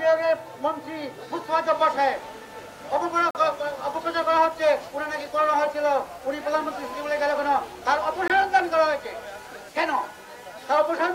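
A block of digital silence at 3.31 s runs about 43 ms, and a second at 8.28 s lasts about 21 ms. In each, the audio drops straight to silence and returns with no fade, and the gaps are heard as short holes. The lengths fit whole output buffers of 2048 and 1024 samples, pointing to the program failing to deliver audio in time and the unfilled buffer being played as zeros.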